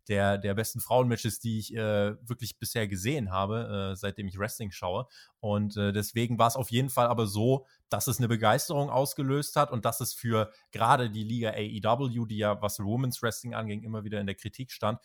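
Nothing is technically wrong with this speech recording.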